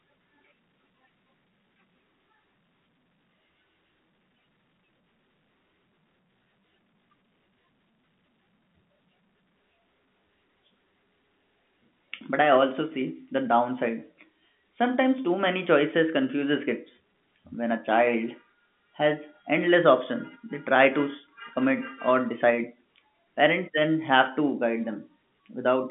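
From 0.71 s to 25.22 s, a click recurs every 1.11 s while the speech is present. There are about twenty of them, evenly spaced, through the telephone-band audio that stops near 3.7 kHz. The steady rhythm points to clock drift buffer slips. Two devices likely run on clocks a few hundred parts per million apart. The buffer between them slowly drifts until a short block, perhaps fifteen or so samples, is dropped or repeated.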